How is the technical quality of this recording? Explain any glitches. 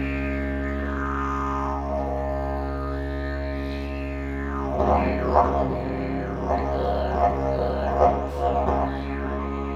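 No glitches can be heard anywhere in this music.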